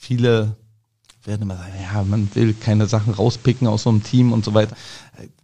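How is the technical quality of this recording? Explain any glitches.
The speech has one glitch. Digital radio blending to analogue, 1.69 to 4.75 s, after "werden immer": the receiver cross-faded over 113 ms to the FM broadcast and back, shifting level about 4 dB and adding hiss roughly 30 dB down.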